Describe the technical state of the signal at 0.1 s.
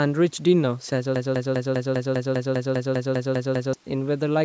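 At 0.1 s the speech is intact, with no fault present, only the ordinary call microphone processing that trims the lowest bass and leaves nothing above 8 kHz.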